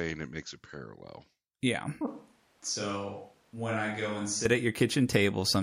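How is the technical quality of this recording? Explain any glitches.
There's one clear glitch, a switch to a distant microphone from 2.07 to 4.46 s. The speech suddenly goes roomy and hollow, thins out in the bass and drops by roughly 10 dB, with room noise rising to around 35 dB below the speech. The likely cause is the close mic's feed dropping out so a farther pickup took over, before it snaps back.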